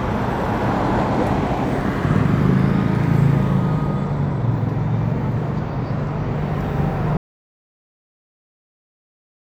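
At 7.17 s the sound cuts off abruptly and the clip stays in total silence until it ends, about 2.4 s later. There is no fade and no trace of room tone or background hiss: the signal simply drops to silence. This is an audio dropout to silence. The input was likely lost partway through, while the recorder kept writing empty samples, so whatever sounded during that final stretch is gone.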